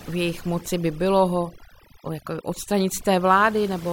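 Overdone noise removal runs through the whole of this short speech recording, from the first moment to the last. A noise reduction stage was pushed too hard, so every frequency band sitting near its estimate of the background noise is pulled far down or shut off entirely, and the softer parts of the voice are caught along with it. The background drops and breaks up into twinkling specks.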